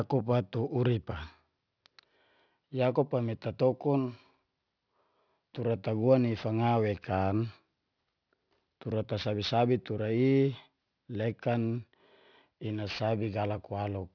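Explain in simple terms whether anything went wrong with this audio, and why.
Yes, something went wrong: aliasing, present from start to finish. The sound points to a drop to about 11 kHz sampling with no filter first, so sharp, hissy sounds above 5.5 kHz folded back down into the speech as gritty, metallic, unrelated tones.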